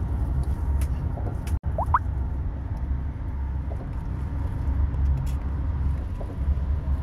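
At 1.57 s the sound stalls: for roughly 60 ms the last instant is smeared out and sustained, dimming as it goes, and at 1.66 s the audio picks up again a step further along, with about 60 ms of the original material simply gone. This is a burst of packet loss. Consecutive packets never arrived in time, so the receiver stretched and faded what it last had, then resumed from the next packet that did arrive.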